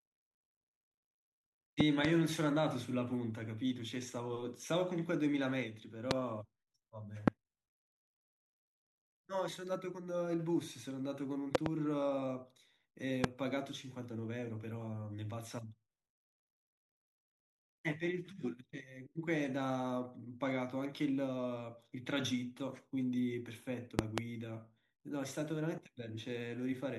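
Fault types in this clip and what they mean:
Loud pop: A sudden voltage pulse, likely from a plug, switch or static discharge, lands on top of the speech, which carries on beneath. Nine sharp pops peak about 20 to 25 dB above the signal. Those near 1.8, 11.5 and 24.0 s come as quick pairs.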